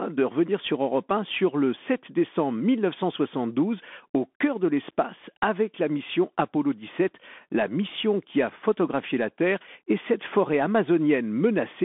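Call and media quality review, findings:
Bluetooth CVSD headset codec, whole clip. Speech band-limited to about 200 Hz–3.5 kHz, nothing above 3.7 kHz. Plainly audible codec damage: scratchy s sounds, granular hiss under speech, distortion on loud bright peaks. One-bit up/down delta coding, adaptive step can't keep pace. Fits a 64 kbps headset link.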